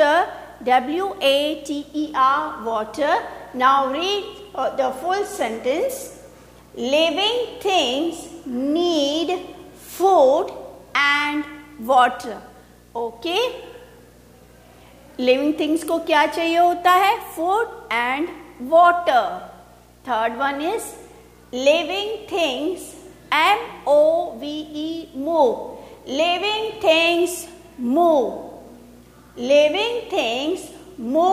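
Video or display buzz runs throughout: a 60 Hz buzz with hash above it, around 30 dB below the audio, from a screen or video cable coupling into the signal path.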